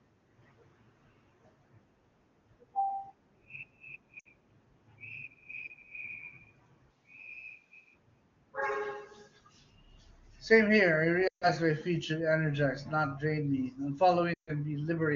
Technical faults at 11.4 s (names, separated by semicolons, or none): lost AMR speech frames